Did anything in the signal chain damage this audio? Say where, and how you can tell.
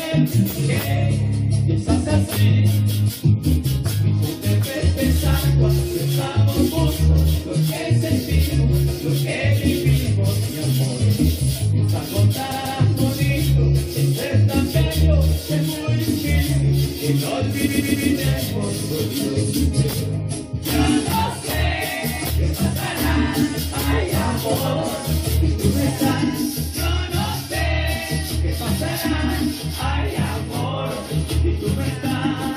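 Yes. Repeated frames at 12.50 to 12.78 s and 17.66 to 18.08 s, in the compressed stream at storage or transmission. The same 139.3 ms block of sound plays again back to back, twice extra at the first spot and three times extra at the second, giving a stutter that stretches the audio by 278.6 ms and 418.0 ms. A block that length fits a run of about six compressed frames being written or sent more than once, with the decoder faithfully replaying each copy.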